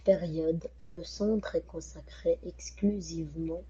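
Speech passing through an Opus call path, with no energy above about 8 kHz, consistent with a wideband setting. From 0.79 to 1.00 s there is a long network dropout, likely packet loss. The receiver covered the missing 0.18 s with a smeared continuation that fades before "centre est consacré" resumes. On a spectrogram this stretch shows blurred, repeating harmonic bands that lose energy over time. The waveform shows a tapering envelope in place of normal syllable shapes.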